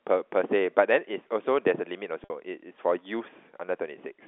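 Around 2.24 s there's a packet loss with pitch repetition, running about 60 ms to 2.30 s, which fits three 20 ms packets dropping out. The receiver loops the last pitch period to bridge the gap, so you get a brief held, buzzy tone before the speech resumes.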